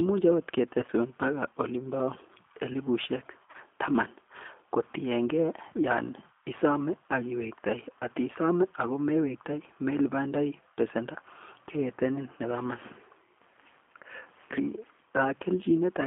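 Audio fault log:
throughout: G.729 codec. Speech sits in a 250 to 3400 Hz phone band and sounds plainly rough and synthetic, which fits an 8 kbit/s pulse-coded vocal model.
0.80–0.90 s and 3.47–3.57 s: VoIP packet loss concealed by the speech codec. About 40 and 50 ms dropped in short bursts; the decoder stretches the last sound into a fading buzz or noise, and it stays smeared afterward.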